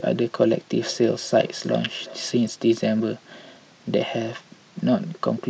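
Speech with feedback echo between two devices from 0.83 to 2.63 s: repeats roughly every 0.4 s at about -18 dB, seen as faint, evenly spaced copies trailing each word on the spectrogram.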